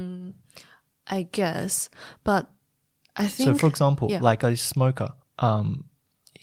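No technical faults can be heard in the speech recording. Nothing in the audio stands out for comment at any point.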